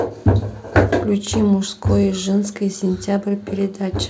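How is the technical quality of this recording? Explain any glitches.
No glitches can be heard.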